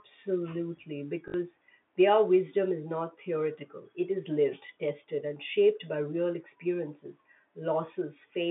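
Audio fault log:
1.28 to 1.34 s, packet loss with last packet repeated: a brief robotic stutter in the telephone-band speech, with a 50 Hz buzz. For 60 ms the previous packet was replayed in place of lost audio, which fits 20 ms packets. Repeats ignore the pitch.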